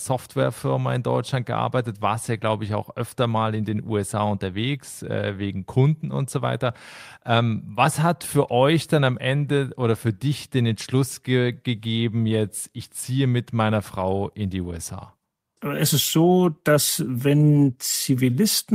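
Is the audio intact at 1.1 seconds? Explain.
Yes, at 1.1 seconds the speech plays through cleanly, with no dropout, click, distortion or other fault.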